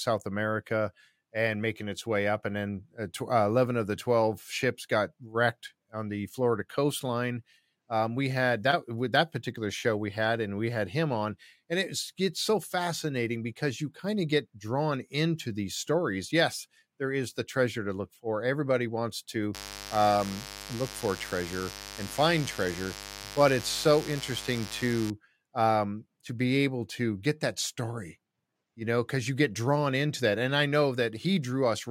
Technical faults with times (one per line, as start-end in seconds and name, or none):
19.54-25.11 mains buzz